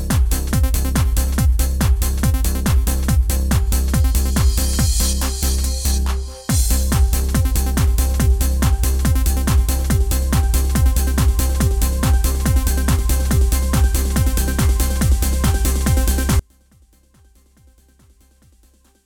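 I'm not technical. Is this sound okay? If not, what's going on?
No, not quite. At about 16.39 s the sound suddenly drops away and stays that way right to the end. It doesn't fade or pause naturally. It just cuts, leaving only a faint trace of the sound far below its normal loudness. That's an audio dropout to a faint residue: the signal was likely lost somewhere upstream while the rest of the chain kept running, so only a weak leak gets through.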